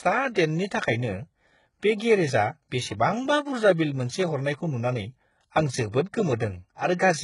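From start to finish the speech carries heavy codec damage, most likely from HE-AAC compression at a very low bitrate; the sound points to something around 12 kbps. Only the lower band is properly coded. The treble is rebuilt by copying lower bands upward under a coarse envelope, so s sounds turn gritty and lispy. On a spectrogram the upper region looks smeared and blocky, harmonics fail to line up across the crossover, and nothing appears above about 11.1 kHz.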